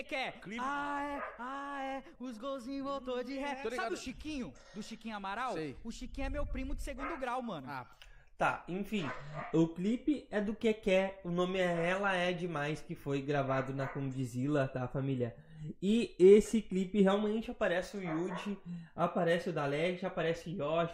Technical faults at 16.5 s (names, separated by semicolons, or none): none